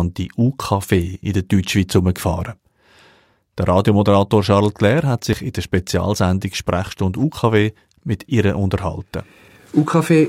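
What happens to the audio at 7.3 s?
At 7.32 s there's a tiny skip: a few milliseconds of speech drop out and the two sides butt straight together. It's likely audio missing between chunks, with the recorder working in 2-second blocks and losing a sliver at the handover.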